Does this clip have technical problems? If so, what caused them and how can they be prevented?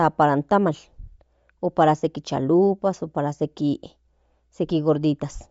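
Yes. Throughout, the speech sounds breathy and grainy, with nothing above 7.7 kHz. This is likely Bluetooth LC3 compression, where sparse bits leave upper bands noise-filled. Use a higher-bitrate link or wired capture.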